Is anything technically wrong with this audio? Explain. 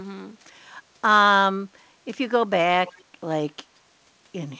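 Yes. From 2.87 to 3.03 s there is an echo leak. A faint copy of the speech returns 173 ms late, well below the main voice. The likely cause is a far-end echo canceller letting loudspeaker sound back into its microphone. The band limit at 8 kHz, which fits a G.722 call path, is not a fault.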